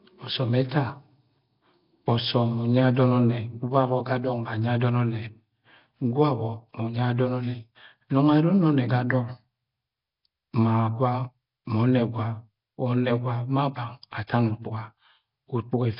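It's a speech recording, and the whole thing has that rough, hissy halo and smeared underwater feel, with nothing above about 5.3 kHz. Heavy Nellymoser compression is the likely culprit; the damage fits a bitrate around 22 kbps, starving quieter bands and filling them with noise.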